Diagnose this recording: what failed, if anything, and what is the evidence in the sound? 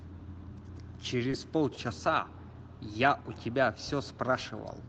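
The failure is at the network and jitter-buffer stage: two short stalls from late packets in this speech. At 1.30 to 1.34 s and again at 1.74 to 1.79 s, a sound hangs on a beat too long with a faint buzzy smear. A packet was late, the buffer ran dry, and the receiver stretched the last audio, about 20 ms the first time and 30 ms the second, then picked up where it left off. Nothing is lost, but the playout delay grows by the same amount each time. Through the Opus call path the band tops out around 8 kHz.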